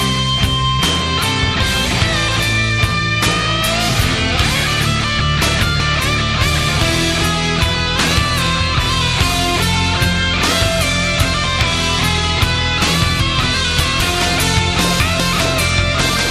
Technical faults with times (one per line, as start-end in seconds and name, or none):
5.20-5.80 chunks out of order
13.20-14.00 chunks out of order
15.00-15.40 chunks out of order